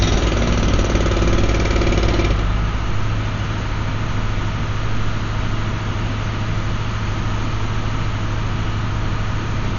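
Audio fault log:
Throughout: Dolby Digital compression, with heavy damage and nothing above 7 kHz, so everything's dull. The rough, fluttery noise around tones fits a starved encoder, likely running near 48 kbps, zeroing many frequency lines and letting the decoder pad them with dither noise.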